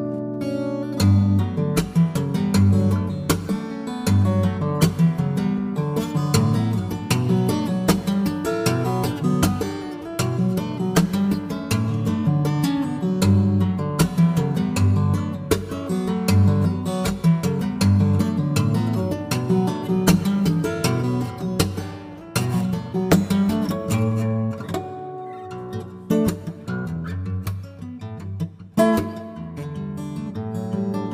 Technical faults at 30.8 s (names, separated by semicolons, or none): none